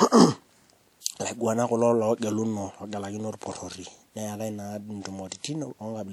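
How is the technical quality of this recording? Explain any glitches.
One glitch occurs in the speech: a pre-echo from about 1.01 to 1.06 s. A transform codec spread its block's quantisation noise across roughly 56 ms, so hiss from the loud attack leaks into the quiet just before it, smearing the onset. Unlike reverb or ordinary echo, this smear comes before the sound rather than trailing after it.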